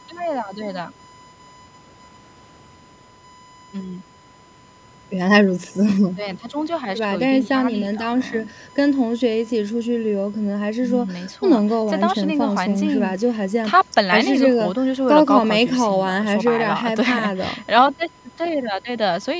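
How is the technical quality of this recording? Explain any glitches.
A steady, fixed-pitch whine at 1 kHz sits under the speech for the whole clip, about 25 dB below it. This is USB whine: the bus draws current in 1 ms frames, and that 1 kHz pulsing leaks into the audio through the power or ground. The call's microphone processing has trimmed the lowest bass and leaves nothing above 8 kHz, neither of which is a fault.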